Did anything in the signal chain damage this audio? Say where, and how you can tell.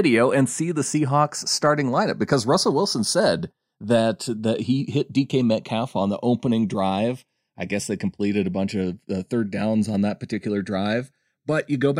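Yes. Channels drifting apart at the converter stage: separate clocks, roughly 40 ppm off, slide the inter-channel delay toward half a millisecond, so summed speech flanges slowly throughout.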